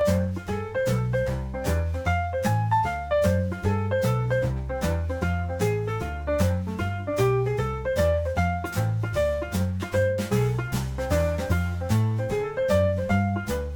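Channel delay, heard as comb filtering, runs throughout. One channel lags roughly 10 ms. Summed to mono, evenly spaced notches from near 50 Hz make the sound hollow.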